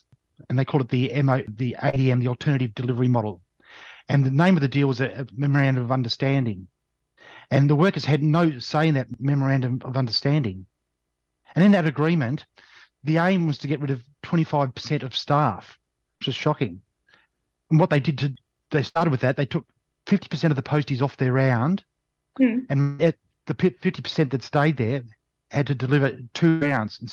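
At 1.89 s and 16.17 s, short concealed packet loss: about 40 ms never arrived and was filled by extending the previous sound. Each is a brief smear, a stretched, blurred patch on the spectrogram.

At 18.89 s and 26.49 s, a burst of packet loss removes about 60 ms and 120 ms. The concealment holds the last sound as a fading buzz or hiss, so the waveform envelope decays and then the audio resumes further on.

From 22.81 to 23.01 s, the sound turns into a fading buzz or hiss for about 180 ms before resuming, with no silent stretch. This is likely a long network dropout. On the spectrogram, the last sound smears horizontally and fades.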